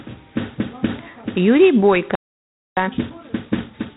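From the first moment the speech carries the rasping, level-following hiss of G.726 ADPCM, with nothing above 3.8 kHz. The coder sends only a few bits per sample describing how each sample differs from an adaptive prediction. The roughness is heavy enough to suggest the 24 kbit/s mode rather than the cleaner 32 kbit/s DECT rate. Unlike steady background noise, the grit swells and fades with the speech itself and drops away in pauses.

At 2.15 s the sound cuts off mid-flow and stays silent until 2.77 s, a gap of about 0.62 s. This is a playback stall, most likely the player running out of buffered data or its output thread being blocked. It differs from a dropout or packet loss because the silence is complete and lasts far longer than a few milliseconds. There are no clicks or concealment noises inside the gap, and the sound picks up again afterwards rather than being replaced.

From 2.77 s to the end, the speech runs hurried at 1.25 times normal speed while keeping its normal pitch. 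This is time-compressed catch-up: the player clears the backlog left by the stall by cutting out small slices and cross-fading across the joins. Because the pitch does not rise, this is distinct from simply playing the audio faster, which would sound chipmunk-like.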